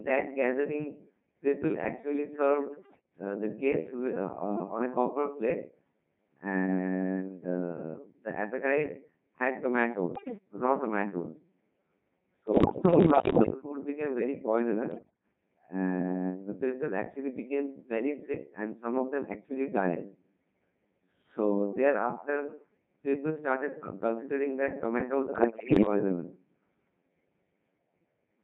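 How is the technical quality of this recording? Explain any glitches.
Technical quality is poor. The whole recording has passed through a Codec 2 vocoder, and five short bursts of bit errors on digital voice radio break it up further.

The Codec 2 vocoder sends only pitch, voicing, loudness and a rough spectral outline, and the receiver rebuilds the speech from sine waves instead of the original waveform. The thin, heavily degraded result points to a mode near 2.4 kbit/s. Throughout, the speech sounds robotic and buzzy, with the natural texture of the voice replaced by synthetic tones.

Bit errors on digital voice radio occur at 2.75–3.10 s, 10.16–10.38 s, 12.48–13.54 s, 14.92–15.23 s and 25.36–25.86 s. Flipped bits corrupt the few parameters each frame carries, so a single error can wrongly set a frame's pitch, level or tone colour. The error rate was about 7 to 10 percent in most bursts and higher, about 15 percent, at 10.16 s. 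In each burst the voice lurches in pitch and loudness and dissolves into warbles, bleeps and robotic gibberish. The longest burst lasts about one second from 12.48 s.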